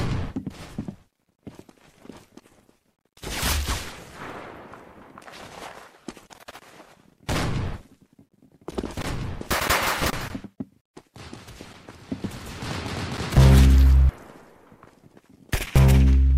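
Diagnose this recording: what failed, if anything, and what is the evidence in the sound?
Nothing in the recording points to a failure at any stage of the chain. No audible event calls for a diagnosis.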